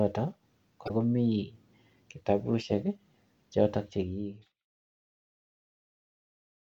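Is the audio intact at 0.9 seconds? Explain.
No. Around 0.9 seconds the speech is broken by a brief glitch lasting from 0.85 to 0.91 s, after which it picks up again. This is damaged data in a compressed stream: some bytes in that stretch were lost or corrupted, so the decoder misread those frames, lost sync, and skipped forward to the next valid frame header before resuming normal playback.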